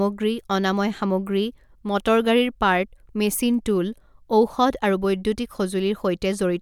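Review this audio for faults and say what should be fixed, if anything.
No technical faults are audible in this speech recording. Nothing needs fixing.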